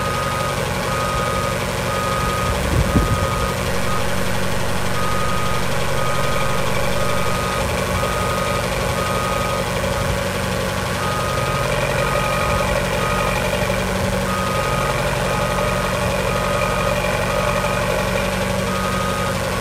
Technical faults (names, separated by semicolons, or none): mains buzz